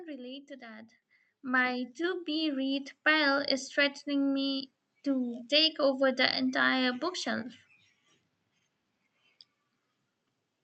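At 1.02 s, right after "relate to that", the microphone volume gets stepped up in one jump of about 9 dB, so the speech and the room noise behind it suddenly get louder together. That's the call software deciding the input was too quiet and raising the device gain at once. It happens again at 3.06 s, between "be read" and "pile is threatening me", this time a smaller step of about 3 dB. The Opus call path's top end stops around 8 kHz.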